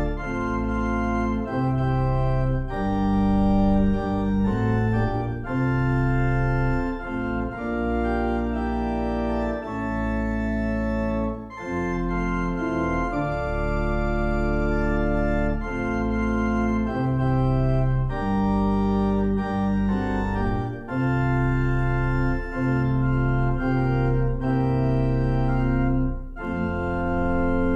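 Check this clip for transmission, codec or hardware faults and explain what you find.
No faults detected.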